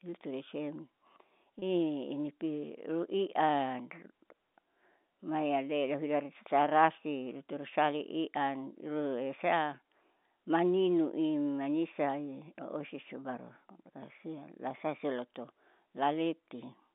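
At 1.59 to 1.62 s the speech briefly holds a slightly buzzy, sustained tone: packet loss with pitch repetition, where the receiver repeated the last pitch period to fill a 30 ms gap, consistent with a single lost packet, over an otherwise band-limited G.711 telephone line.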